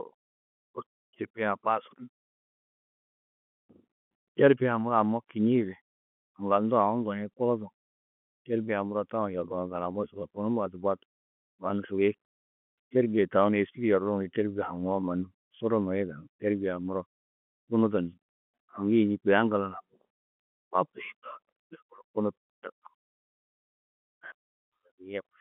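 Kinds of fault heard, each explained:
Nothing stood out on listening that would count as a fault.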